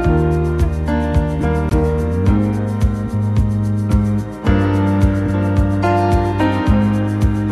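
At 1.69 s the sound drops out for an 18 ms gap with smeared edges and resumes where it stopped: a gap at a join of encoded pieces, left by untrimmed encoder delay and padding.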